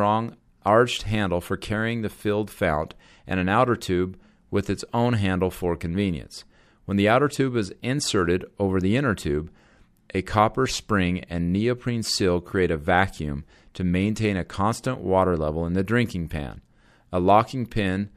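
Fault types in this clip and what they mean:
Nothing stood out on listening; no fault could be heard anywhere in the audio.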